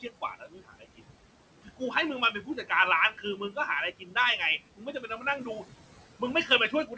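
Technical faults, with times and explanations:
Throughout, noise suppressor artifacts: the suppressor treats the steady room noise as something to remove and pulls it down by about 17 dB, band by band and frame by frame. So the background sinks in the gaps and swells back under the speech.
0.02–1.01 s, 1.63–1.81 s, 2.32–2.71 s, 3.12–3.57 s, 3.99–4.16 s, 4.76–5.65 s and 6.19–6.97 s, speech cut by the noise suppressor: the suppressor mistook soft parts of the speech for noise and turned them down by up to about 17 dB. Consonants and word endings sound swallowed, and roughly half a second of the opening stretch is affected.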